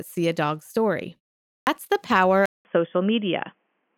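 Speech, with a clipped start after a pause at 1.53 s: after a 0.41 s silence, about 0.14 s of the next sound is swallowed while the output wakes. From 2.46 s the sound abruptly turns dull, with nothing above 3.4 kHz after a 0.19 s gap and a faint new noise floor at an unchanged level, most likely an input switched to a poorer device rather than a gradual loss of bandwidth.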